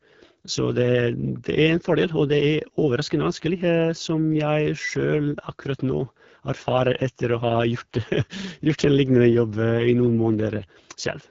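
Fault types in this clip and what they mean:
AMR wideband (HD Voice) codec, throughout: the speech is rough and raspy, as a pulse-excited vocal tract model leaves it at its low rates, which fits about 8.85 kbit/s. The band above 6.4 kHz is filled with shaped noise, and nothing sounds above 7.5 kHz.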